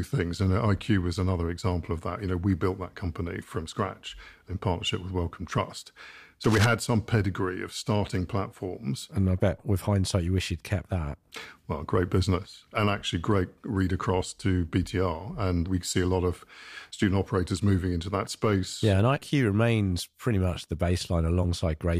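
Cable scratch noise at 6.44 to 6.66 s, just before "some pedigree of starting": a fifth of a second of dense, ragged scratching, only a little quieter than the speech. A worn cable or connector being moved, its contact resistance fluctuating rapidly, is the likely cause.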